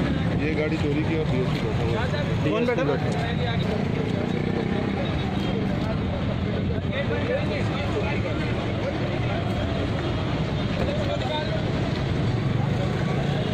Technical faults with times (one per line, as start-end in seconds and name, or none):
none